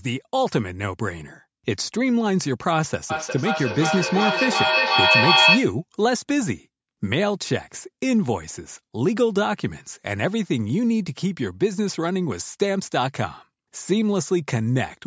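It's a speech clip, and between 3.1 and 5.82 s there's a feedback echo between two devices: two devices in the same room on one call, one playing back what the other's mic sent, which that mic then picks up again. Each echo canceller only removes its own device's output, so the sound keeps coming round roughly every 0.4 s, getting thinner and ringier. The loop peaks about 5 dB above the speech, so the repeats stack up instead of fading.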